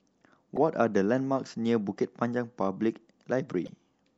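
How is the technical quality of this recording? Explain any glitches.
Technical quality is rough: there's audible compression damage all the way through and two short glitches.

Throughout, the speech sounds watery and a bit swirly with dulled top end. It's likely MP3 compression at a low bitrate around 64 kbps, starving high frequencies and flickering weak detail.

At 0.56 to 0.58 s and again at 3.65 to 3.69 s there are brief blips. That's damaged data in a compressed stream: the decoder misreads corrupted frames and resyncs.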